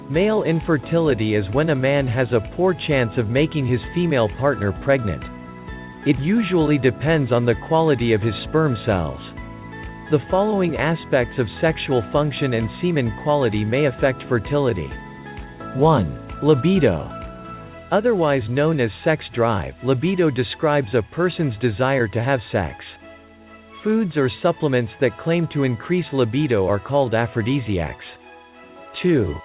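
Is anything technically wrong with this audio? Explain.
No, nothing is technically wrong: the audio passes through a telephone-grade call path whose narrow band, with nothing above 4 kHz, fits a 64 kbps G.711 mu-law codec working as intended.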